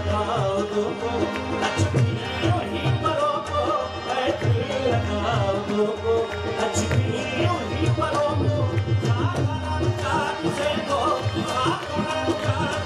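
No technical faults can be heard anywhere in this audio. Nothing breaks up, drops out or changes abruptly along the way.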